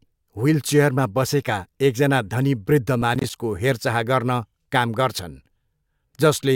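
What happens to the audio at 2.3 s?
Nothing goes wrong at 2.3 s; the speech there is intact and carries on without dropout, glitch or other fault.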